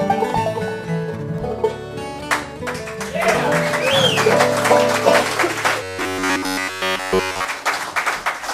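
Robotic sound from repeated short buffers runs from 5.83 to 7.45 s. Across that stretch the sound turns into a rigid, metallic buzz pitched at 93.8 Hz, with the repetition covering essentially the whole span. The likely cause is audio arriving too seldom, so the playback side keeps replaying a slice of roughly 10.7 ms, one period of that buzz, while the real material is skipped.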